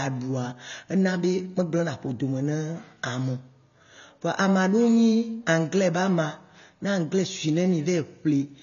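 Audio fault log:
throughout, AAC compression: the speech sounds dull and smeared, with a warbling, fizzy edge on sibilants and held vowels, and nothing survives above 6.9 kHz. The likely cause is AAC-LC coding starved of bits, which fits a bitrate near 24 kbps. The encoder drops the top band and quantises the rest so coarsely that some bands vanish or turn to noise. A spectrogram shows a hard ceiling at 6.9 kHz with patchy, flickering holes beneath it.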